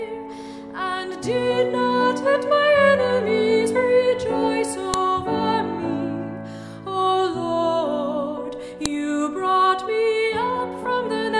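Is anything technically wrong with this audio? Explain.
Yes. Sharp, loud clicks snap out at 4.94 s and 8.86 s, cutting across the sound regardless of what it is doing. This is a file header played as audio: joined WAV pieces kept their headers, so those bytes play back as a brief burst of samples.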